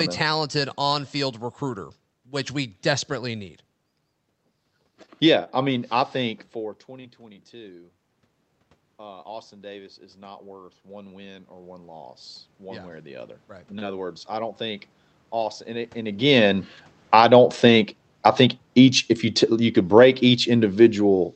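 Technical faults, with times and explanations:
6.87–17.73 s, automatic gain rising: Around 6.5 s the talker moves away and the input drops by about 18 dB. The gain control responds slowly, adding about 12 dB over roughly eleven seconds, so the voice and the room noise swell upward together.
16.21–21.35 s, automatic gain falling: When the talker moves again around 16 s, the still-raised gain makes the input too loud. The control then pulls its gain down gradually, so the sound starts loud and sinks, room noise included, until the end.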